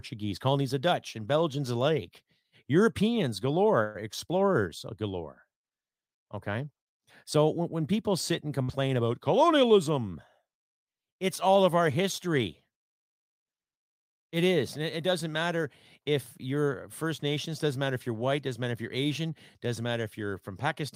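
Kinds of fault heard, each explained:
Call audio freeze: From 3.83 to 3.97 s, just before "explorers galore", the last sound is held and fades for about 113 ms. The speech then picks up exactly where it stopped. Nothing is skipped, so the pause is simply inserted and the rest of the call runs about 113 ms later. The likely cause is packets held up in transit, leaving the jitter buffer briefly empty.
Burst of packet loss: At 8.63 to 8.71 s, after "when people sit and", a short run of audio never arrives in time. The receiver stretches the last sound for about 58 ms and fades it. When speech resumes at "about colonialism", roughly 60 ms of the original is gone. The result is a brief fading fill, then a small jump forward. The timing stays aligned with the original.
Jitter buffer speed-up: Between 17.03 and 17.65 s, after "doesn't matter if you're", the receiver has more audio queued than it wants. 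It trims tiny pitch-length slices, one after another, to shed that backlog. About 40 ms is removed in total. The speech plays about 5% faster at unchanged pitch and sounds slightly rushed, running into "matter if you're white". This pulls the delay back toward its target.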